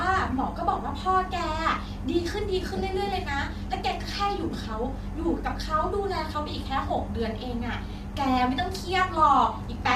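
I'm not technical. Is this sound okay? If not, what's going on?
No. From start to finish the voice sounds rough and grainy, with a hiss sitting between the tones of the voice and a thin, artificial edge at the top instead of natural crispness. This is likely low-delay AAC compression, the kind used in video calls. It slices the sound into very short chunks to keep the delay low, and here it was squeezed into so little data that there's too little detail to render a voice cleanly, so the damage is plainly audible.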